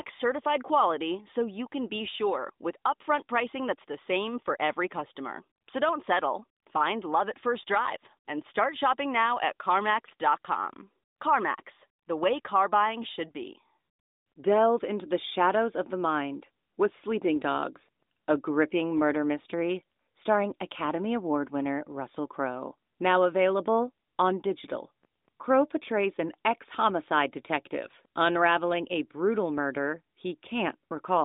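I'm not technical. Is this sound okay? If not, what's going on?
Yes, the signal is in good technical order: it is speech carried over an ordinary mobile phone line using the AMR narrowband mobile codec, which is why it has the familiar thin phone-call sound with nothing above about 3.7 kHz, and nothing has gone wrong with it.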